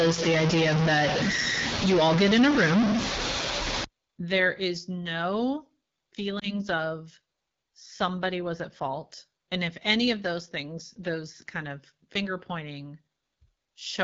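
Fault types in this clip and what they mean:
AMR wideband (HD Voice) codec, throughout: The speech runs through the wideband AMR coder at 8.85 kbit/s, one of its two lowest rates. The coder models the voice as a pulse-excited vocal tract up to 6.4 kHz and fills the band from 6.4 to 7 kHz with shaped noise. At this rate the model is too coarse, so the speech has a plainly rough, raspy texture.
Stuck bit, 0 to 3.84 s: Until just before "there is no", the sound carries a distortion that follows the waveform. The likely cause is one data bit held at a fixed value by a faulty line or converter, which throws roughly half the samples off by that bit's weight. Because the bit also flips with the sign of small values, the quiet gaps fill with noise.
Lost AMR speech frames, 6.39 to 6.54 s: Just before "of somebody was at", one 20 ms speech frame failed its checksum after a radio error. The decoder bridged the gap by reusing the last good pitch and vocal tract settings at reduced gain, which produces a brief dip or warble. 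As the following frames restore normal decoding, the voice comes back weak or rough for a moment.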